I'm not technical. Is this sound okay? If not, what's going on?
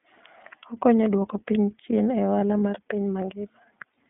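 No. The whole clip has gone through the iLBC codec, a compression method for internet calls. It keeps only a telephone-width slice of sound, roughly 200 Hz to 3.5 kHz, so everything is thin and muffled. The plainly audible rough, slightly synthetic edge is what sets it apart from a clean but narrow phone line.

There is also a short burst of lost iLBC frames from 2.40 to 2.42 s, between "duoko piny chien e" and "mar piny". One piece of the stream went missing, which points to a single dropped packet, and the decoder covered it by briefly holding the last sound with a faint buzz. Unlike a dropout, there is no silence, and the sound recovers straight away.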